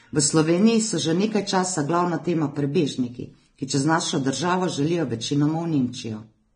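From start to finish the speech has nothing above about 9.7 kHz, and the band below carries the smeared, watery texture of heavy compression. The file itself is encoded as MP3 at a high rate, so this is likely low-bitrate audio saved at a high bitrate. An earlier, much leaner encode, consistent with low-rate Vorbis, discarded the top band and fine detail. Re-encoding at a generous rate only preserved that damage and could not restore it.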